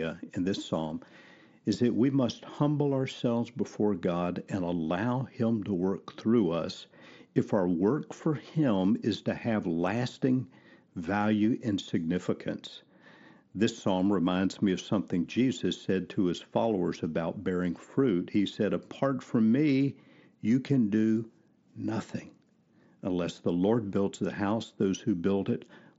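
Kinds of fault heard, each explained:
No technical fault is present in this speech; it has come over a Bluetooth mSBC headset link working as designed, with the bandwidth stopping at 8 kHz and only the light grain on louder passages that this wideband headset codec normally leaves.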